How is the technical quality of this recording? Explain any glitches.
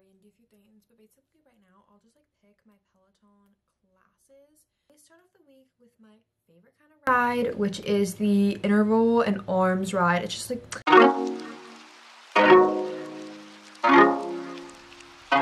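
There's one real problem, in the first half. From 0 to 7.07 s the level drops by about 33 dB and the sound turns faint, likely from one channel inverted, so shared material cancels when summed to mono.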